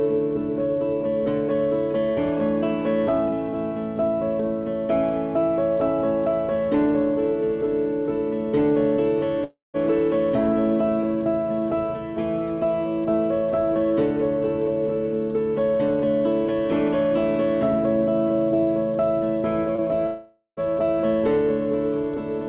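From 9.44 to 9.77 s, a likely long network dropout lost about 0.3 s of audio. The receiver extended the last sound as a fading buzz or hiss, leaving about 0.16 s of silence before the audio resumed, with the missing part gone.

From 19.76 to 19.81 s, short concealed packet loss removed about 30 ms. The decoder bridged the gap by continuing the preceding sound, which adds a little time and leaves a brief smear.

From 20.06 to 20.60 s, a second likely long network dropout removed about 0.51 s. The fill fades into about 0.12 s of silence, and the audio returns, all of it band-limited to 4 kHz by the G.711 call path.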